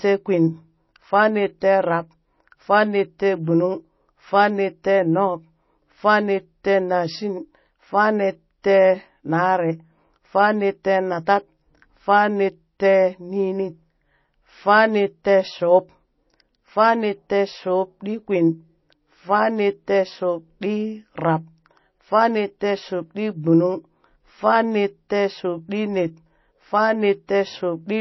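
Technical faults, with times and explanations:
Throughout, MP3 compression: nothing above 5.8 kHz, with watery, swirly s sounds unlike a clean low-pass, likely from a very low bitrate near 24 kbps.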